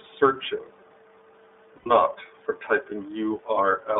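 iLBC codec coding runs throughout the clip. The speech is confined to a telephone band of roughly 300 Hz to 3.6 kHz and has a plainly audible rough, synthetic edge, consistent with iLBC's 30 ms frame mode at 13.33 kbps, each frame coded on its own.

Lost iLBC frames occur from 1.76 to 1.87 s. A gap of about 90 ms, which fits three 30 ms frames dropped in transit, is filled by the decoder repeating the last pitch cycle blended with noise. It sounds like a briefly held, buzzy vowel before normal speech resumes almost immediately.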